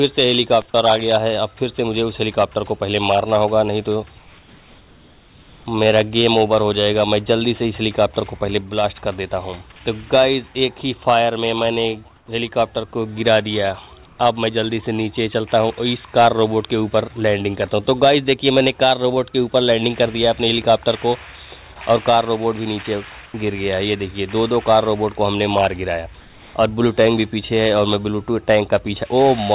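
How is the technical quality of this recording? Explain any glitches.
The main glitch is comfort noise in place of the background, in five gaps: 4.18–5.66 s, 12.16–12.28 s, 14.06–14.18 s, 23.26–23.34 s and 26.2–26.54 s. In each, the real background, sitting about 27 to 35 dB below the loud parts, gets swapped for a flat, featureless hiss, about 1 to 4 dB quieter, then snaps back. The likely cause is discontinuous transmission: the sender goes quiet when it hears nothing worth sending, and the receiver fills in synthetic noise. All of it rides on a call path with nothing above 4 kHz, which points to narrowband G.711.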